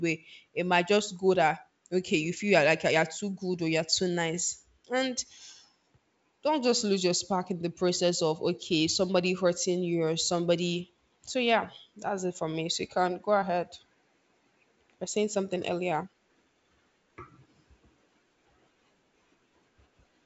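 No faults found: the speech sits in G.722 wideband telephone coding with nothing above about 7.7 kHz and at most a faint upper-band hiss, which fits the 64 kbit/s mode.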